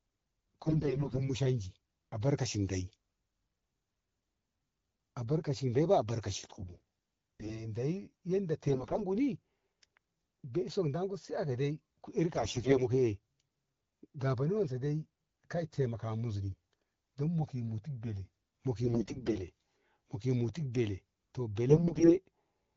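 AMR bit errors at 0.65–1.30 s, 6.54–7.74 s (right after "abarkaci dei ba albarkaci"), 8.68–9.05 s, 12.33–12.82 s, 18.84–19.47 s and 21.70–22.16 s. Flipped low-priority bits misplace excitation pulses and skew the pitch, gain and spectral detail, so the speech keeps its pitch and level but turns hoarse, scratchy and gargly. The damage is harshest in the first burst. Between bursts the wideband sound has the clarity of AMR-WB at around 12.65 kbit/s.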